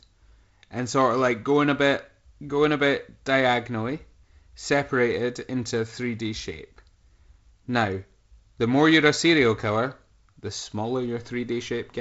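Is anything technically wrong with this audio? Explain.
No, nothing technically wrong can be heard here.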